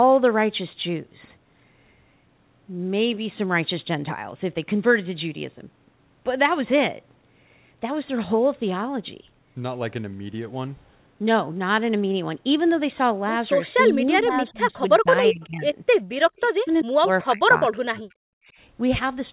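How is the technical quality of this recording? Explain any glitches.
The recording has clear call-processing faults concentrated in its last six seconds. Its bandwidth stops at 4 kHz, which fits a narrowband G.711 mu-law call path at 64 kbps.

Speech suppressed in double talk, 13.76 to 15.74 s: with both sides likely talking at once, the echo canceller treats the near talker as echo and turns it down. Across roughly one and a half seconds the speech dips by around 20 dB.

Echo leak, 16.36 to 16.82 s: one side's echo canceller likely failed to remove all of its loudspeaker pickup and sent it back. A faint delayed copy of the speech, lagging 387 ms and sitting about 25 dB below it, trails behind.

Speech suppressed in double talk, 16.41 to 18.18 s: a second, harsher episode, overlapping the echo leak, again likely triggered by simultaneous talk. For about a second in total the speech is cut far deeper, by around 40 dB, so parts nearly vanish.

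Background gated by the echo canceller, 18.46 to 18.55 s: the canceller clamped the microphone while the loudspeaker played. The room sound briefly drops by about 18 dB for roughly 70 ms, a short hole in the ambience before it returns.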